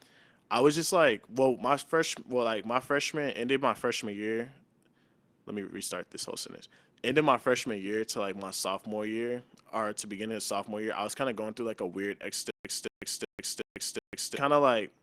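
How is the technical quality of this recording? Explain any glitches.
Two glitches mar this speech recording.

At 1.07 s, between "I was just" and "well my fresh well", a lost packet was rebuilt from error correction: the decoder played a low-bitrate backup copy, so about 20 ms sounds briefly rougher and noisier, but with no gap.

From 12.51 to 14.36 s, after "through like a weird", the stream likely stalled and replayed its last fragment: a stutter with silent gaps, where a 230 ms burst repeats five times with 141 ms of digital silence between, every 371 ms.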